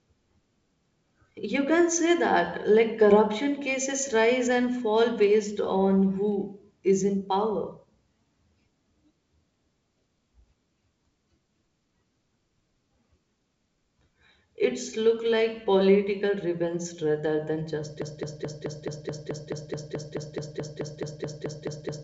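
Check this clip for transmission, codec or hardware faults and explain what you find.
One fault is present, a broken-record loop at the end of the speech, with the wideband G.722 coding audible as a top end stopping near 7.7 kHz.

From 18.02 s to the end, right after "political revenge rather than", a 0.22 s fragment repeats 19 times back to back, likely a stalled stream resending its last buffer, losing the remaining audio.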